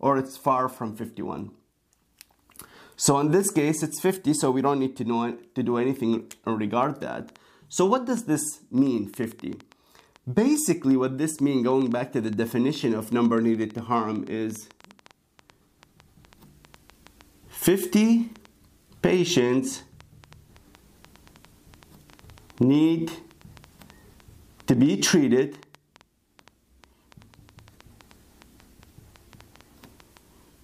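From 6.83 s to 30.18 s a train of clicks runs over the sound, about 5.7 per second at an uneven pace, roughly 150 in all. The clicks are alike in shape and reach about the level of the sound itself, so they stay audible as ticking and popping, through pauses as well. The likely cause is an outside pulse source such as interference from nearby equipment or a faulty connection or power supply.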